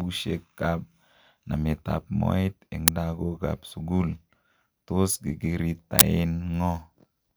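Speech clip with two uninitialised buffer faults: a loud crack at 2.88 s (about 5 ms) and a burst of digital noise at 5.99 s (about 20 ms), where stale memory was played before audio was written.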